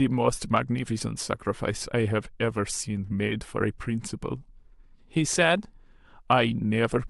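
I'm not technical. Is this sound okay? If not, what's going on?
Yes, nothing in this speech recording points to a technical problem. There is no moment in it that stands out as needing explanation or repair.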